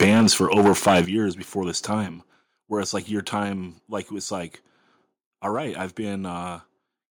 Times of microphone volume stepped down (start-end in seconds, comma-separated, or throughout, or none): 0.04, 1.05, 2.07